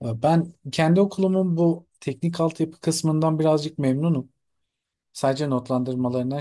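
Speech, with no audible technical faults anywhere.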